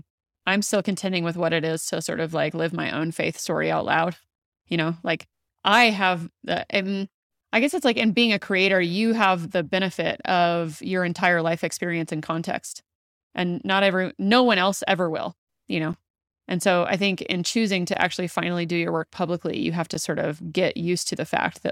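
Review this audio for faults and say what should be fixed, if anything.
From about 15.93 s to 19.95 s, just after "ever will you know" and running up to "sort of", the speech is broken by a few sharp ticks spaced exactly 2.0 s apart, each a tiny hole of near silence around 10 ms long. This is periodic USB or driver dropouts: something on the system stalls the USB bus or audio driver on a fixed schedule, so a slice of samples never arrives and silence fills the gap. To prevent it, find and disable the background task polling the bus, or record with a larger buffer.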